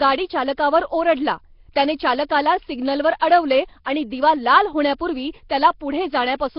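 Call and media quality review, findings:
Likely Nellymoser compression on the capture path: fixed two-bit-per-sample block coding at a rate near 22 kbps, with weak bands noise-filled. Heavy damage throughout the speech. Rough hissy halo, underwater smear, nothing above 5.3 kHz.

Pre-echo at 3.19 s to 3.21 s, between "ओरडला त्याने चालकाला सिग्नलवर" and "अडवले आणि दिवा लाल". The transform block spreads quantisation noise sized for a sharp attack into the quiet before it. The result is about 20 ms of hiss ahead of a softened onset.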